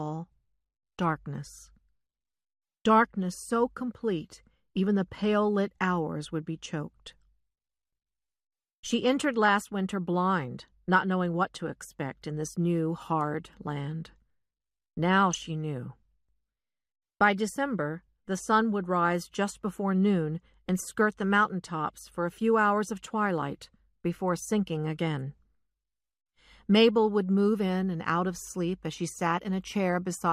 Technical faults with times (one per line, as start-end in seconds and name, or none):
9.45-9.49 DAB burbling
15.33-15.40 DAB burbling